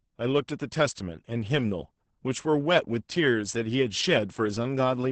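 From start to finish the speech has passed through Opus voice compression, running its SILK linear-prediction coder in wideband mode at a very low rate; the heavy damage fits a bitrate around 10 kbps with 20 ms frames. Starved of bits, the coder quantises the excitation coarsely and drops the upper band entirely, so nothing sounds above about 8.8 kHz. The speech comes out muffled and hoarse, with a slightly robotic texture.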